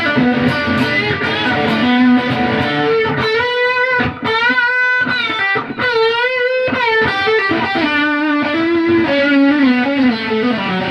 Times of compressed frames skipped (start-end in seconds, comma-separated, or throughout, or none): none